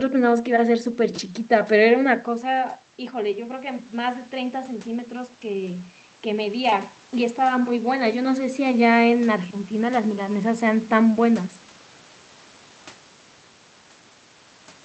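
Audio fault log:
2.51–8.62 s, automatic gain rising: just before this, around 2 s, the talker drops back from the mic and the level falls by about 9 dB. The AGC notices the quieter input and slowly raises its gain by about 7 dB over roughly six seconds, so the voice creeps back up instead of snapping back. The room noise swells right along with it, which is the giveaway that the gain is moving rather than the talker.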